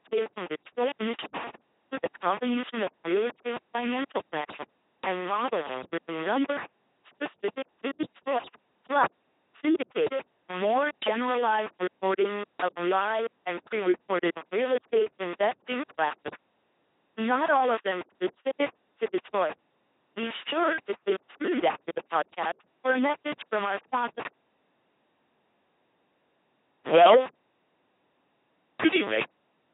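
From start to finish, the speech has been passed through an LPC-10 vocoder, and heavily damaged by it. The coder throws away the actual waveform and keeps only a crude filter model of the vocal tract. It then resynthesises each moment as either a buzzing pulse train or plain noise, which fits a 2.4 kbit/s military coder. The result is a mechanical robot voice with wrong buzzes and hisses where voicing was misjudged, and nothing above 3.8 kHz.

Also present throughout is a likely cause of low bit depth without dither. The audio appears to have been rounded to very few levels, consistent with 4 bits, with no noise added to break up the error. Because that error tracks the signal, a grainy distortion rides on the quieter sounds and shifts with the sound itself. It sits only about 15 dB below the speech, and the quietest stretches sputter or collapse.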